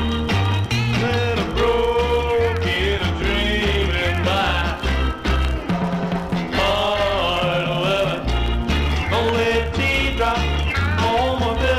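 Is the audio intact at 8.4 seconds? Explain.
Yes, the audio is intact at 8.4 seconds, with no fault audible at that moment.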